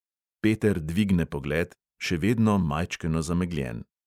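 No technical faults turn up anywhere in the recording. There is no moment in the speech that needs a time stamp or a note.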